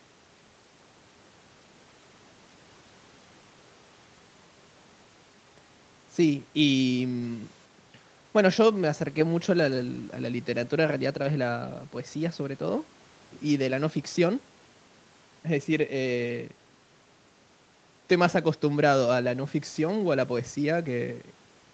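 The speech carries no audible technical faults.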